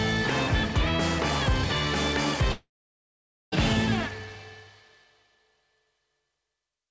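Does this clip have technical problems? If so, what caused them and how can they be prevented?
Yes. A long network dropout runs from 2.52 to 3.54 s. About a second of audio likely never reached the receiver, so the last sound was stretched into a short fading fill. Roughly 0.83 s of silence follows, and playback resumes with that stretch missing. A more stable network link, or a deeper jitter buffer with retransmission, would prevent it.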